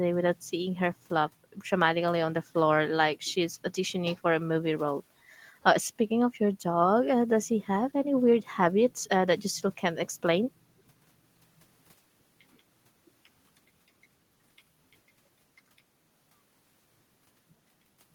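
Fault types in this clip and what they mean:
No fault types are present in this clip.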